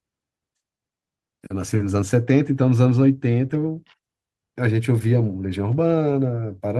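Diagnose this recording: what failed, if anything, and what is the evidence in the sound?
Three brief patches sound grainy and noisy rather than dropping out: about 20 ms at 1.73 to 1.75 s, about 40 ms at 3.49 to 3.55 s, and about 20 ms at 5.71 to 5.73 s, with the speech running on without a gap. This is a lost packet rebuilt from error correction at the network stage. Each time, the following packet carried a low-bitrate copy of the missing audio, and the Opus decoder played that rougher copy. The 40 ms patch fits two separate packets.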